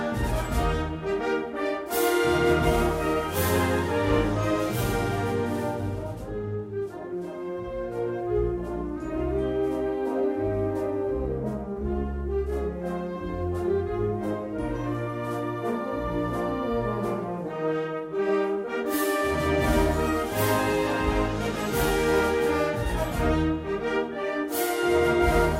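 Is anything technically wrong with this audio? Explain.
No, nothing stood out as technically wrong on listening to this audio.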